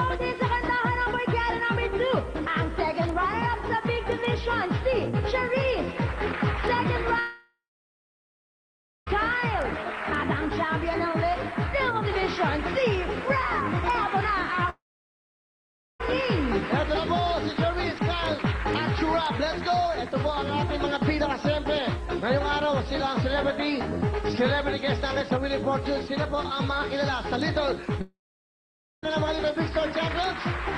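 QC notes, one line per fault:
7.19–9.08 s, 14.70–16.01 s and 28.01–29.04 s, long network dropout: the sound stops for about 1.9 s, 1.3 s and 1.0 s. Each gap begins with a brief buzzy continuation of the last sound that fades within a few tenths of a second. Near-silence then holds for about 1.5 s, 1.2 s and 0.9 s. The audio resumes later with that stretch missing, the likely result of packets never arriving.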